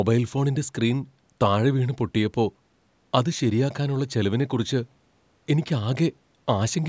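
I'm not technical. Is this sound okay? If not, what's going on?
Yes, this sound is okay, and nothing in it is going wrong.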